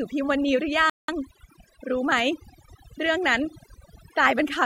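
A speech recording with overdone noise removal throughout: the background collapses to near silence dotted with twinkling specks, unlike a low-bitrate codec's smearing. A playback stall cuts the sound mid-flow from 0.90 to 1.08 s, about 187 ms of dead silence, not a natural pause; the likely cause is the player running short of data.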